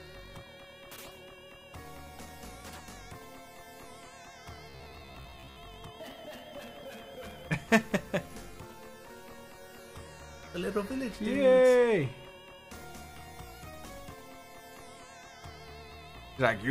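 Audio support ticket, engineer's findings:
Robotic sound from repeated short buffers, 4.70–5.58 s. Rigid metallic buzz near 67 Hz, matching a roughly 15 ms loop. Likely cause: audio starved, about half the time filled by repeating the last buffer. Unlike dropouts, no silence; unlike distortion, the buzz rate stays fixed.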